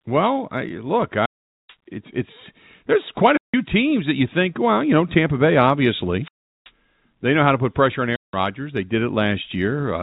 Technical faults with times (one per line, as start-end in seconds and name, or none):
1.18-1.76 wireless microphone squelch dropout
3.27-3.63 wireless microphone squelch dropout
6.21-6.71 wireless microphone squelch dropout
8.11-8.36 wireless microphone squelch dropout